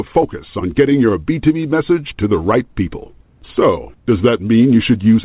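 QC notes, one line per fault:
Nothing to flag here: the speech comes over an ordinary call path, a G.711 mu-law link at 64 kbps with nothing above 4 kHz, which is just how that codec sounds.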